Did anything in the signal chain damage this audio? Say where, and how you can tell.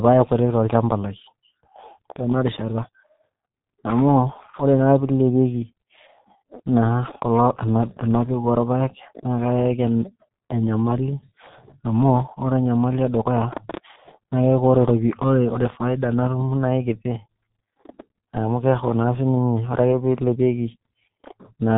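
Yes, the G.723.1 codec stage caused heavy damage throughout: muffled, hoarse speech with blurred consonants, consistent with a low-bitrate stream of about 6 kbit/s. A spectrogram shows nothing above 3.8 kHz and smeared detail in 30 ms blocks.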